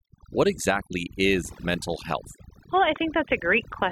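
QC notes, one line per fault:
Throughout: overdone noise removal. The denoiser was pushed too hard, so quiet parts of the speech got gated with the noise, leaving twinkly near-silence.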